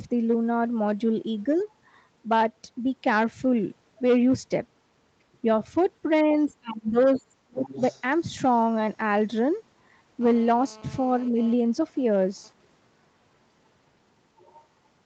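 Speech, and a fair bit going on in it. There are five spots where the other side's voice leaks through, likely residual echo the canceller didn't catch: a faint scrap at 1.59 s sitting about 40 dB under the talker, then 6.33 to 6.53 s at roughly 35 dB down, 7.14 to 7.22 s and 7.66 to 8.02 s, both only about 20 dB under, and 14.37 to 14.6 s at around 30 dB down. Right around them you get speech suppressed in double talk: the talker's level sags from 6.5 to 6.97 s, dropping about 25 dB at worst over roughly 400 ms, and again from 7.14 to 7.67 s, dipping about 30 dB across about half a second, likely because the canceller turned the voice down while the far end was talking. There's also a tiny dip of about 5 dB from 11.3 to 11.38 s, about 70 ms. Then from 10.21 to 11.54 s there's GSM phone buzz, that hard raspy 217 Hz drone with a stack of harmonics, sitting about 24 dB below the signal and steady the whole time. 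That steadiness fits a 2G handset nearby in an active call, its transmit bursts being rectified in the audio circuitry. Everything tops out around 8 kHz, consistent with Opus at about 32 kbps in wideband mode on the call path.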